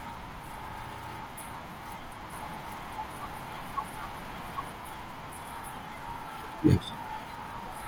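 From 2.32 to 4.72 s the speech carries a doubled audio track: a second full-band copy, about 5 dB quieter, trails roughly 0.7 s behind, dry and without room colour, cutting in and out abruptly. This is likely a slower second capture path or misaligned edit. At 6.43 s there is damaged data in the compressed stream: corrupted bytes make the decoder misread frames and hunt for the next header, producing a short glitch.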